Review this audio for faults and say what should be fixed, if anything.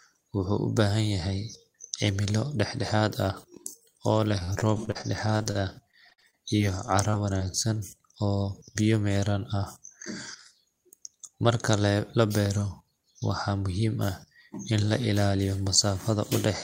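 From 4.39 to 7.42 s there's repeated packet loss: 21 short gaps, none longer than 50 ms, each patched by stretching the last bit of speech, so it goes choppy and robotic. A larger jitter buffer or forward error correction would help here.

There's jitter buffer speed-up at 8.86 to 9.15 s (114%) and 11.15 to 11.49 s (109%). The receiver cut a few tens of milliseconds of pitch periods to drain excess delay, so speech sounds rushed. Smoother packet delivery upstream would keep the buffer from overfilling.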